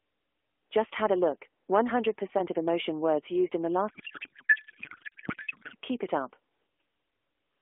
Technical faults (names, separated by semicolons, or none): codec payload misread